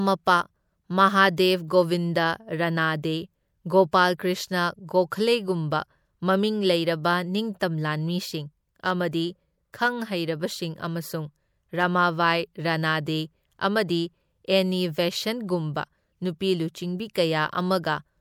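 Pre-echo smears five sharp speech onsets, at 1.37, 5.71, 7.60 and 9.73 s and from 17.13 to 17.15 s. A short hiss of 10 to 20 ms leads each attack. The codec's block-wide quantisation noise, sized for the loud onset, spills into the silence before it, blunting the transient.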